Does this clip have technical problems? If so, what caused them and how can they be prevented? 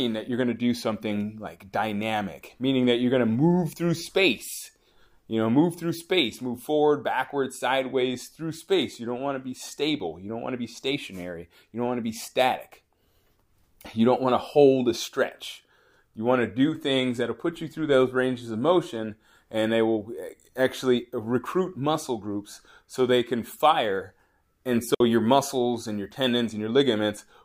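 Yes. A digital wireless dropout occurs at 24.95 s: the receiver lost too much data from the radio link and muted, leaving a clean 60 ms hole of near silence, with no noise burst, just before "your muscles and your". Keeping clear line of sight and short transmitter-to-receiver distance prevents it.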